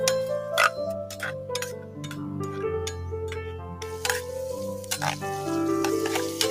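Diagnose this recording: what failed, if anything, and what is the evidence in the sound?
Throughout, the level pumps and thins: held, steady parts and decaying tails sink while sudden onsets pass, with gain swings of around 10 dB. This is a call-processing fault: a noise suppressor applied to music or sounds, built for speech, mistaking sustained tone and ambience for noise.

Two dips stand out: from 1.76 to 2.11 s the sound drops by about 7 dB, and from 3.57 to 3.82 s by about 6 dB. Both are sound cut by the noise suppressor, which judged those stretches as noise and attenuated them harder than their surroundings.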